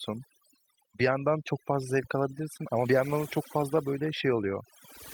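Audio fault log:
throughout, overdone noise removal: a noise reduction stage was pushed too hard on a noisy speech recording, so every frequency band sitting near its noise estimate is pulled far down or cut off entirely, and the softer parts of the speech are removed along with the noise. The background collapses into near silence scattered with twinkling, chirpy specks. The light Opus coding, full band at 24 kbps, adds little audible colouring of its own.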